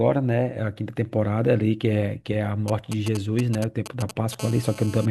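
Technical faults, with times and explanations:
2.68–4.35 s, GSM signalling bursts: a 2G phone close by is sending short groups of radio bursts, the kind it sends while setting up a call or text, and the audio circuit rectifies them. You get a galloping dit-dit-dit of brief 217 Hz buzzes, roughly 10 dB under the speech.
4.39–5.06 s, GSM phone buzz: now the phone is on a call and transmitting steadily at 217 bursts per second, and the rectified pulses come through as a hard, raspy 217 Hz buzz full of harmonics. It has nothing to do with the speech and sits about 17 dB below it.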